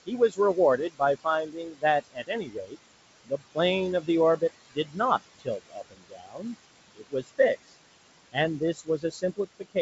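Throughout the clip, noise suppressor artifacts are present: the suppressor pulls down the bands it judges to be steady background by about 19 dB, frame by frame. Unlike plain gating, the leftover room noise swells under the speech and sinks between phrases.

Speech cut by the noise suppressor happens at 0.06 to 2.76 s, 3.25 to 3.57 s, 4.01 to 5.0 s, 5.39 to 6.55 s, 6.95 to 7.72 s and 8.32 to 9.76 s. Here quiet parts of the speech are mistaken for noise and dropped by about 18 to 21 dB. The first stretch loses the most, well over a second in all. These are not dropouts, because faint consonants and word endings sound swallowed rather than silenced.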